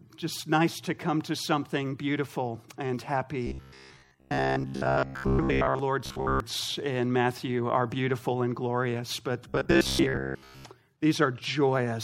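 From 3.47 to 5.79 s, 6.06 to 6.40 s and 9.49 to 10.65 s there's robotic sound from repeated short buffers: a rigid, metallic buzz around 66.7 Hz. Likely starved input, with roughly 15 ms chunks looping over most of the sound.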